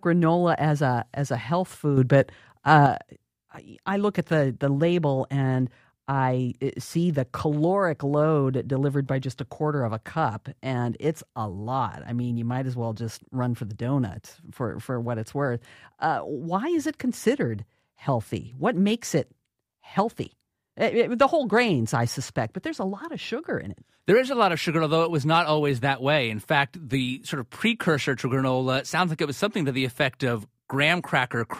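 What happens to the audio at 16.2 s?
Nothing goes wrong at 16.2 s; the speech carries on intact through that moment with no audible fault.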